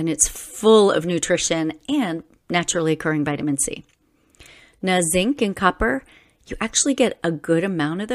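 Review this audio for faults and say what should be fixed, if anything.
Nothing needs fixing: the speech signal holds steady throughout, with no dropouts, level jumps or other defects to address.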